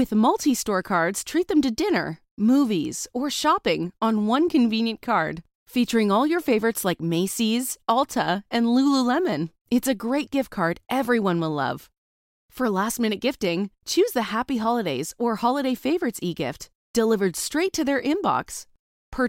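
Speech recording with no audible technical faults to report.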